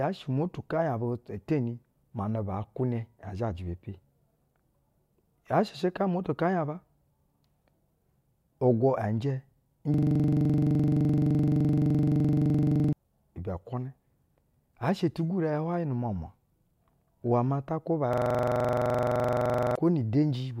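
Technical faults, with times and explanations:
9.94 to 12.93 s: system hang loop. The playback froze and the hardware kept replaying one 42.67 ms slice of its ring buffer, about 70 times. That fits a 2048-sample buffer. The loop repeats at 23.4 Hz, giving a rapid machine-gun stutter. Roughly three seconds of speech are lost.
18.13 to 19.76 s: system hang loop. Right after "iwɛ maa ta kwuba", the same 42.67 ms slice cycles about 38 times at 23.4 Hz. Again this points to a 2048-sample buffer. The stutter replaces about one and a half seconds of speech.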